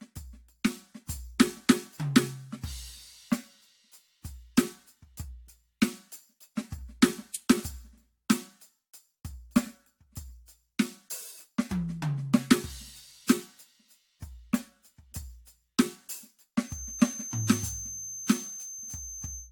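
Music throughout carries generation loss: a swirly, hollow smear with softened attacks, more damaged than a single encode would leave. It is likely the result of around five successive AAC-LC passes at what sounds like 96 kbit/s, each requantising on a shifted frame grid, with nothing above 19.2 kHz. From 16.59 s to the end at 19.52 s, a feedback whistle sits at 6.3 kHz, about 10 dB below the music, thin and swelling and fading slowly in level. It is likely a speaker-to-microphone loop held just short of runaway.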